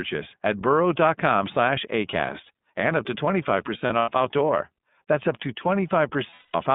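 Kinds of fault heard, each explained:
iLBC codec: narrow, slightly rough and synthetic speech, with nothing above roughly 3.6 kHz and clearly audible coding damage, as this 30 ms-frame low-bitrate VoIP codec produces.
Lost iLBC frames: held, buzzy vowel-like stretches around 3.78 to 4.09 s and 6.30 to 6.55 s, where the decoder repeated the last pitch cycle over missing packets.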